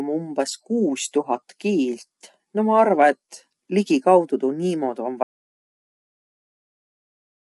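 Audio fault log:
Throughout: low-delay AAC compression. The speech sounds rough and grainy, with noise filling the gaps between harmonics and nothing above 11.7 kHz. This points to a low bitrate near 32 kbps. The likely cause is AAC-ELD's short frames, which smear pitch detail, unlike the pre-echo of long-frame codecs.
5.23 s to end: audio dropout to silence. The sound stops abruptly and never returns. What follows is plain silence with no room tone, which rules out a fade. The likely cause is an input that was lost while the recorder kept writing empty samples.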